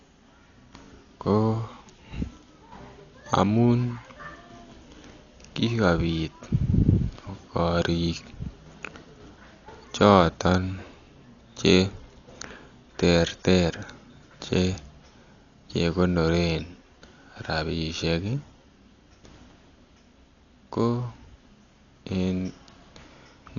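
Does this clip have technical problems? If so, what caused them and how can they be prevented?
Yes. Dolby Digital compression damage runs through the whole clip. The speech sounds dull, with nothing above 7 kHz, and a rough, fluttering noise clings to voiced tones. The likely cause is a bit-starved encoder, at a rate that fits about 48 kbps, which narrowed the band and left bare frequency lines to be filled with dither noise. To prevent it, encode at a much higher bitrate or deliver from a less heavily compressed source.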